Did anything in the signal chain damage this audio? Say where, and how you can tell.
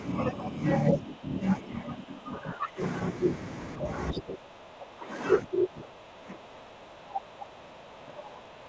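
Yes. Speech suppressed in double talk appears in the call-processing stage at 0.16–0.57, 0.91–1.43, 1.59–2.8, 3.78–3.86, 4.12–5.12 s, and from 5.43 s to the end. The speech dips by about 5 dB at the shallowest and about 20 dB at the deepest, worst around 4.1–5.1 s. This is likely an echo canceller treating overlapping far-end talk as echo and turning the near talker down with it. The codec sits beneath this, its band stopping at 8 kHz, consistent with G.722.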